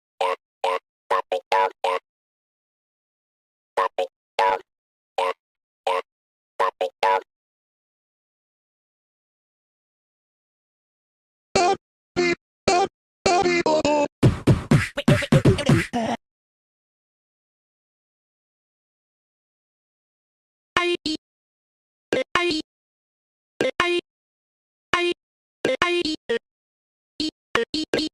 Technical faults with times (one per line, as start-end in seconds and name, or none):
4.11-4.95 repeated stalls (stutter)
5.35-5.57 call audio freeze
6.23-6.60 call audio freeze
11.06-25.56 jitter buffer speed-up
27.27-28.05 jitter buffer speed-up